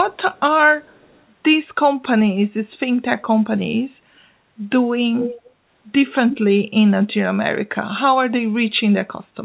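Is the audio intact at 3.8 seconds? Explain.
Yes, the speech at 3.8 seconds is intact, with no dropout, glitch or distortion at that moment, only the narrowband sound of a telephone-grade call codec that leaves nothing above 4 kHz.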